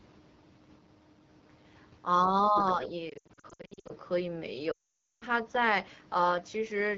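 Throughout, the speech carries the rough, raspy texture of the AMR wideband (HD Voice) codec at a low 8.85 kbit/s; a spectrogram shows smeared harmonics and shaped noise filling 6.4 to 7 kHz.

From 2.48 to 2.55 s the speech dips by about 10 dB, likely speech suppressed in double talk, visible as a brief notch in the waveform envelope.

From 2.56 to 2.88 s a second voice sits roughly 10 dB under the talker, likely the other side's voice leaking through, appearing as faint, separate harmonic traces.

From 3.10 to 3.92 s lost AMR speech frames break the speech into scattered fragments that drop quickly to near silence, about half a second lost in total, with runs up to 80 ms showing as smeared gaps. From 4.71 to 5.24 s a similar half second of loss leaves the sound dropping to near silence before it returns.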